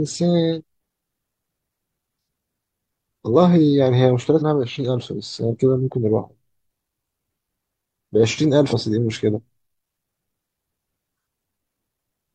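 Three short glitches break into the speech, at 0.58 to 0.62 s, 4.37 to 4.43 s and 8.68 to 8.74 s, each lasting about 50 ms. They are bursts of damaged data in a compressed stream: corrupted bytes in the encoded file make the decoder misread those frames, so it outputs garbled sound and loses its place until it finds the next valid frame header and resumes normal decoding.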